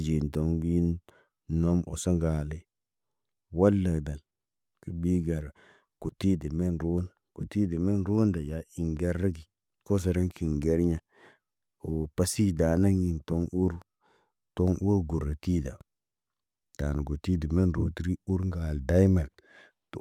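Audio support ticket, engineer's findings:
No audible faults found.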